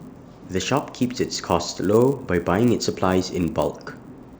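From start to finish the speech carries a buzz at 100 Hz, the sign of a resampler restarted on every block. The conversion from 16 kHz to 48 kHz was run on 10 ms chunks in isolation, so each chunk edge was filtered without its true neighbours and picks up a small error. Those errors recur a hundred times a second and vanish in pauses. A spectrogram shows thin vertical lines every 10 ms across the voiced stretches, and the waveform shows tiny steps at matching intervals.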